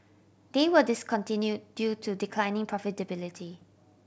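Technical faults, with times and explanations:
3.54–3.63 s: bit errors on an ADPCM link. Flipped bits derail the decoder's step size and predictor, giving rough pops; spectrogram shows brief broadband smears, waveform jagged level jumps.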